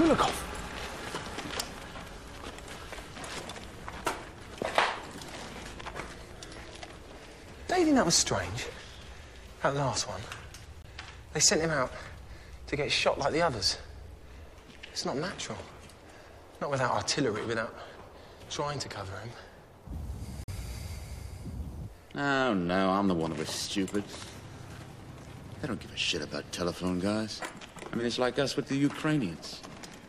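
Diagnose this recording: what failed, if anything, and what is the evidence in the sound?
The fault sits at the codec decode stage, where a corrupt frame was muted. The sound drops abruptly to silence at 10.82 s for about 38 ms, and again at 20.44 s for about 64 ms, before resuming with no shift in timing. On a waveform each event is a flat, hard-edged gap. A spectrogram shows a clean vertical band with no energy across the whole spectrum. Bit errors in the compressed stream made the decoder reject the affected frames, and the player substituted silence. Each gap's length fits a run of whole codec frames.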